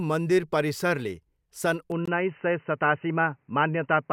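At 1.92 s, right after "मन्दिर परिसरले सन्", the speech abruptly turns dull and band-limited for the rest of the clip, most likely because the input switched to a poorer device. With no silence or level jump at the switch, a spectrogram shows everything above 3 kHz vanishing at once, and a new noise floor appears roughly 45 dB below the speech.

From 2.06 to 2.08 s, still just after "मन्दिर परिसरले सन्", a 21 ms gap at a join of encoded pieces opens where the separately encoded segments were butted together with their padding silence left in. It fits a join every 4.0 s. On the waveform it is a flat dropout with smeared edges, and the speech resumes where it stopped.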